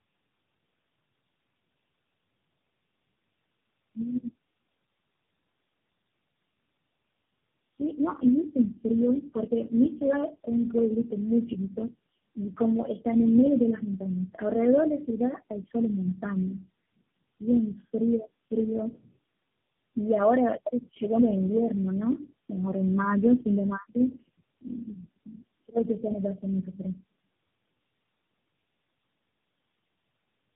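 Tandem speech coding runs through the whole clip. The speech sounds as if it crossed four low-rate speech coders in a row, each decoding and then re-encoding what the previous one had already damaged, with plain telephone-rate links between them. Errors compound at every stage, so the speech is rougher, more muffled and more warbly than any single coder would leave it. Nothing remains above 3.8 kHz, which is consistent with narrowband telephone coding along the whole path.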